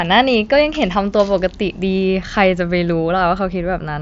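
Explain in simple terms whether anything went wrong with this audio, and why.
Nothing went wrong: the speech came through a Bluetooth headset link using the mSBC codec, which is working as intended and simply carries no sound above about 7.7 kHz, so the top end sounds a little trimmed.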